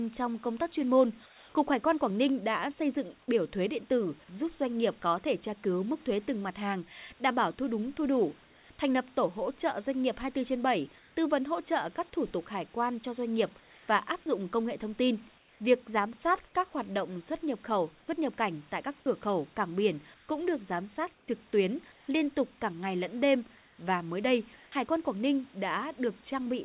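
At 1.26–1.54, 8.44–8.7, 10.98–11.16, 13.6–14.26 (after "quan cho doanh nghiệp"), 15.38–15.6, 20.14–20.28 and 21.14–22.08 s (between "cũng được giám sát" and "liên tục cả ngày"), the room background becomes comfort noise in place of the background. The pauses turn steady and featureless, up to about 4 dB quieter, likely from discontinuous transmission on a call link. At 14.22–14.26 s, just before "công nghệ thông tin", the sound likely dropped by the voice detector leaves about 20 ms of sound replaced by synthetic noise.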